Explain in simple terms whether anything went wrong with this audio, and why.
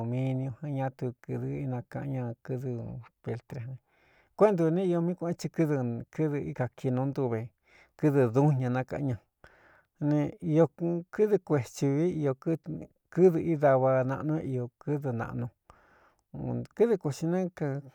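Nothing went wrong with this speech recording, as no technical faults can be heard anywhere in it. The sound carries on steadily throughout, with nothing breaking in or interrupting it.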